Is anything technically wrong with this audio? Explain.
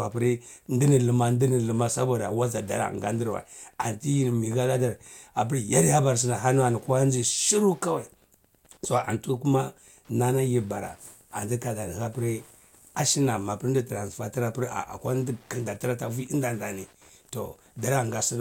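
Yes. Wi-Fi interference runs through the whole recording: a nearby Wi-Fi radio's beacon, repeating every 102.4 ms, is rectified by the audio circuitry, producing a steady ticking near ten times per second, sitting roughly 35 dB below the speech.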